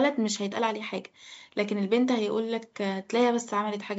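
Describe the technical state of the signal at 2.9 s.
At 2.9 s the signal is intact, with only the usual call microphone processing, whose lowest bass is trimmed.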